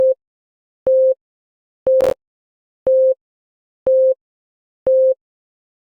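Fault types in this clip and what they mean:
Processor overload crackle: between 2.01 and 2.50 s the audio tears into a gritty crackle as the processor repeatedly misses its deadlines for short buffers, and each miss leaves a hard-edged gap of silence. The spacing points to buffers of around 10 ms, which fits a few dozen missed. A single dropout is one clean hole. This is a rapid chain of tiny breaks that stops abruptly when the load clears.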